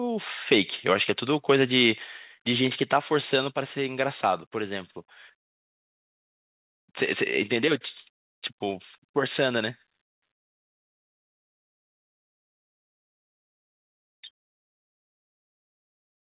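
From 0.90 to 0.94 s, microphone overload: the input level was likely set too high, driving peaks about 3 dB past the converter's ceiling so roughly one percent of samples have their tops sheared flat. The loudest syllable gains a brief, harsh crackle.

At 2.04 s, the microphone volume stepped down: the call software likely reacted to that clipping by cutting the device's input gain by about 3 dB in a single move. The speech and the background drop together, abruptly, to a quieter level, heard through a narrowband call path with nothing above 4 kHz.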